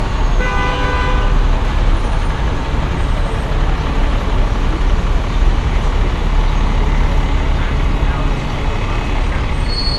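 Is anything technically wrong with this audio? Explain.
Yes. Generation loss runs throughout the clip, likely from about seven successive MP2 encodes at a rate around 96 kbit/s. Each pass quantised on a shifted frame grid, so the noise piled up. The sound is swirly, smeared and hollow, with blurred attacks and nothing above 11.9 kHz.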